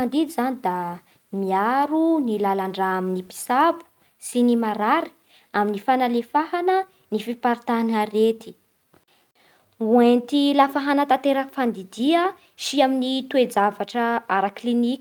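No dropouts, clicks, distortion or level jumps turn up anywhere in this speech recording.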